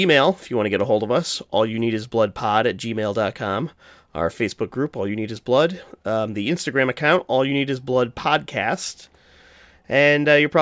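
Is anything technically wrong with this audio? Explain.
No, nothing technically wrong stood out on listening to this speech recording.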